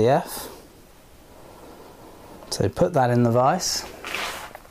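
A brief click or buzz at 2.48 s breaks the audio, too brief to register as a stutter. It is a repeated buffer: fresh audio failed to reach the output in time, so the device replayed the block it had just played, heard twice in total with a hard join. The repeated piece lasts about 3 ms, which fits a 128-sample buffer, and almost no audio seems to be lost, only delayed by the duplicate.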